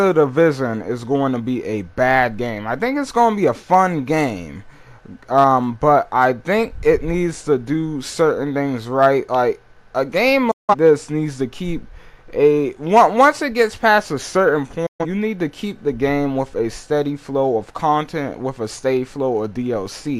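At 10.51 to 10.75 s and 14.86 to 15.05 s, digital broadcast dropouts mute the audio behind a quick 8 ms fade. Unlike a clean edit, the signal simply vanishes, then resumes later.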